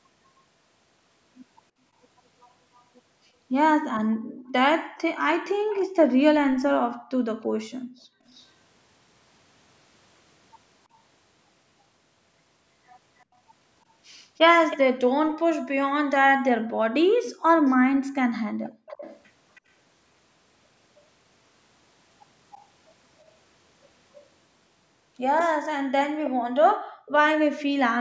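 A speakerphone's echo canceller likely let part of its microphone pickup through, so a faint copy of the speech returns about 317 ms late, in an echo leak from 2.8 to 5.88 s. From 4.07 to 8.24 s, the background is gated by the echo canceller: while the loudspeaker plays, the microphone is pulled down hard. The room sound dips by up to about 40 dB, for roughly a second and a half in total. The delayed copy recurs briefly at 8.28 to 8.46 s and barely at 10.94 to 10.98 s. It is loudest, only moderately below the speech, at 13.19 to 15.34 s, and persists from 17.65 to 24.26 s. Within that stretch, the background drops out again at 18.53 to 18.86 s, by about 39 dB. A final echo comes at 26.24 to 27.12 s.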